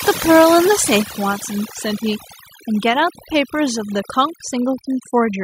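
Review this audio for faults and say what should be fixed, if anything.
Overdone noise removal runs through the whole speech clip. The noise reduction is set too strong. It shuts off individual frequency bands near its noise estimate, taking quiet parts of the voice with them. The background drops and breaks up into twinkling specks. To prevent this, lower the reduction strength so it cuts less deeply into bands near the noise floor.

At 1.02 s, voice and background drop together by about 5 dB in a single step. This is likely a microphone volume stepped down by the call software, which judged the input too loud and lowered the device gain at once. To prevent this, set the input level correctly beforehand and turn off automatic microphone gain adjustment.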